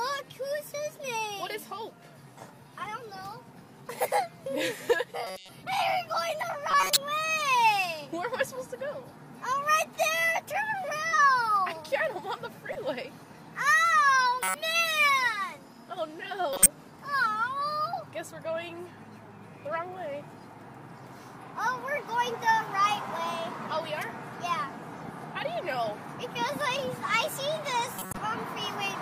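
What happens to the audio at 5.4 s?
At 5.4 s the audio is inside a corrupt frame decoded event running from 5.27 to 5.49 s. Several consecutive compressed frames arrived with flipped bits, and the decoder played them rather than concealing them. Misread gain values and spectral codes put energy at the wrong frequencies, so the span sounds like a short garbled burst of chirps and noise, peaking at roughly -25 dBFS, that ends abruptly where intact frames resume.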